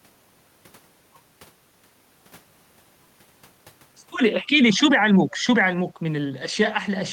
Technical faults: echo leak

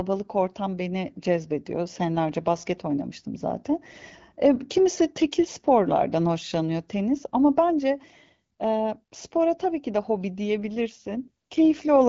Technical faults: AMR rate drop

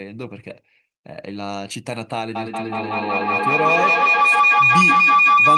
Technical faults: feedback howl

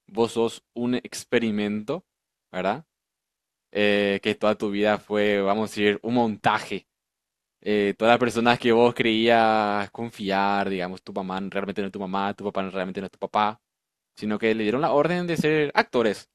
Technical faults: none

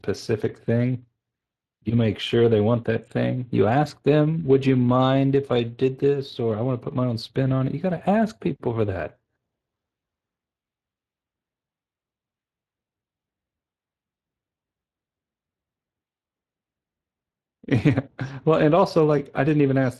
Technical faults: Speex codec

